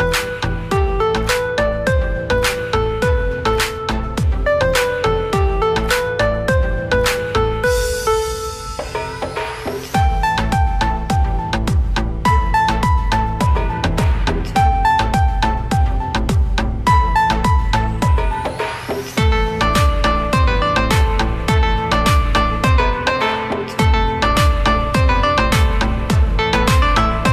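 No technical faults occur at any point in the audio, so there is nothing to describe in time order.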